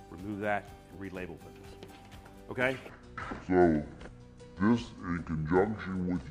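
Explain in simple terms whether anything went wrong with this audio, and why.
Something does go wrong, about 2.89 seconds in. From there to the end, you've got a section at the wrong speed: everything plays at roughly 0.62 times its proper speed, so it suddenly drags and drops in pitch by around seven semitones, deep and sluggish. Speed and pitch slide down together, which is the giveaway. The likely cause is that this stretch was played back or edited against the wrong clock rate.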